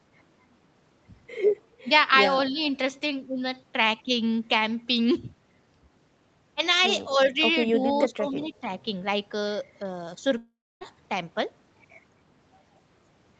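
At 2.51 s the speech dips by about 10 dB for roughly a tenth of a second, and from 8.09 to 8.66 s it sinks again by a similar amount in pieces. This is speech suppressed in double talk: the echo canceller, likely confused by both sides talking at once, turned the talker down along with the echo.

Inside that second dip, from 8.45 to 8.57 s, a faint delayed copy of the voice surfaces about 0.25 s behind the original and roughly 25 dB below it. This is an echo leak, likely from a loudspeaker-side echo canceller letting some of its microphone pickup through and sending it back.

At 10.37 s the audio breaks off for about 0.44 s, until 10.83 s. The last sound is stretched into a fading fill, with about 0.27 s of near silence before the speech resumes, with that stretch gone. This is a long network dropout, likely packets that never arrived and were concealed by the receiver.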